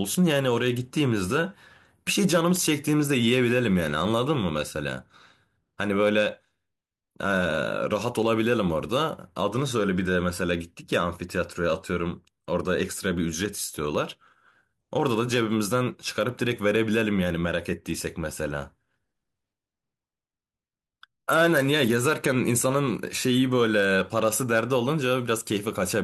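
No technical faults can be heard anywhere in the recording; the speech signal stays continuous and steady throughout, with no interruptions or level disturbances.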